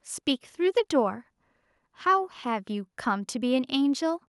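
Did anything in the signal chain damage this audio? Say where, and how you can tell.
No, nothing in the signal chain damaged this audio.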